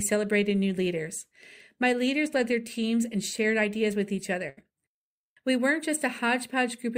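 After "shared ideas with each", a burst of packet loss at 4.49–4.59 s smears the last sound into a fading 75 ms tail, then cuts 80 ms, visible as flat, decaying spectrogram bands.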